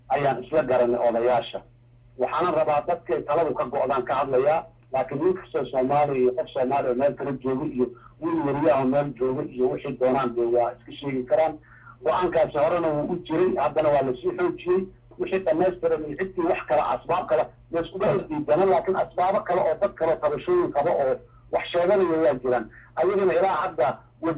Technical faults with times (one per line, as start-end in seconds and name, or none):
none